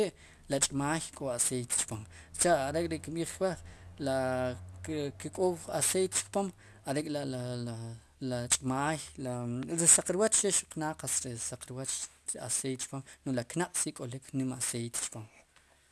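Aliasing runs through the whole speech clip. It sounds like a drop to a 24 kHz rate without filtering, folding content above 12 kHz back as unrelated tones roughly 15 dB down. Sibilants turn gritty, and unlike a clean low-pass, energy stays dense right up to 12 kHz.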